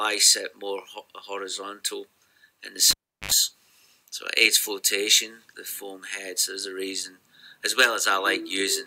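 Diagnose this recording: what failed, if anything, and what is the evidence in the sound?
The failure is in the analogue wiring: a cable pulled and plugged in while the signal was live. At 2.91 s a pop marks the disconnection, and the sound drops to near silence for about 0.36 s. As the plug goes back in, a burst of 50 Hz mains buzz lasting about 71 ms appears while only the tip makes contact and the ground is still open. A second pop at 3.31 s marks full reconnection and the sound's return.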